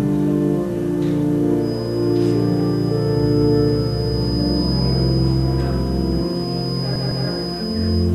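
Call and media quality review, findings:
Feedback whistle, 1.57 s to end of clip. Thin steady tone at 5 kHz, roughly 15 dB under the main signal, level swelling and fading slowly. Likely cause: speaker-to-mic loop in the capture path sitting just at the feedback point. One frequency sustains but never runs away. Check echo canceller, device gain, speaker placement.

Repeated frames, 6.95 to 7.27 s. Stutter: a 156.7 ms block plays two extra times. Adds 313.5 ms to the audio. The block size points to a short run of compressed frames duplicated in the encoder output or the transport. Check the jitter buffer, packet resend logic and file writer.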